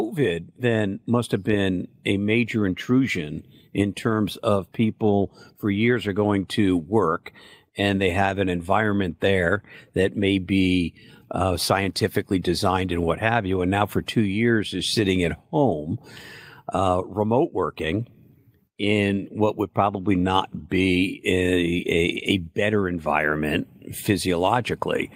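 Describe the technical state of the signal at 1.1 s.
At 1.1 s the speech signal is intact, with no audible fault present at that moment.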